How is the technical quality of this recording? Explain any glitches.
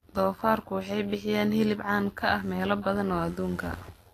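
Technical quality is poor. Two faults run through the whole speech clip.

Throughout, the treble sounds hissy and grainy. This is likely Vorbis compression, where coarse treble quantisation fits a low bitrate near 33 kbps.

Overlap-add ripple is also present throughout. Mismatched frame overlaps make the level dip about 6 dB around a hundred times a second, giving a metallic buzz with extra tones around each note.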